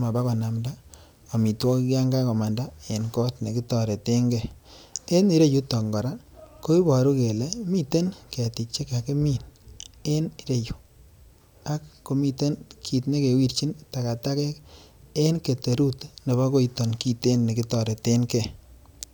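Sample clock jitter, 0 to 1.82 s, before "yoon kakomanda en kot": clock wobble of roughly ten microseconds adds hiss rising on loud, bright speech.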